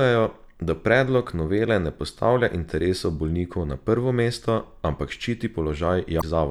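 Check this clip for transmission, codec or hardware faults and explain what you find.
One codec fault is present near the end of the speech. From 6.18 to 6.24 s, damaged data in a compressed stream makes the decoder lose frame sync, producing a brief glitch.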